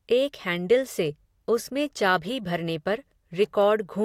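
Nothing here needs fixing: it's a short speech recording, and no technical faults turn up anywhere along the way.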